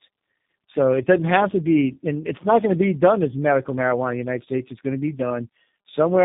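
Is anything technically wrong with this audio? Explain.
Yes, there's tandem speech coding throughout the whole clip. The speech has passed through two low-bitrate speech codecs in a row, with the second re-encoding the first one's already damaged output, so the errors stack. That fits something like G.723.1 feeding G.729A via a G.711 leg. It sounds rough, muffled and warbly, with nothing above about 3.7 kHz.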